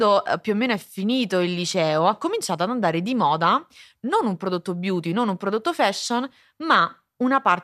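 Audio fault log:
No audible faults were found in this speech clip.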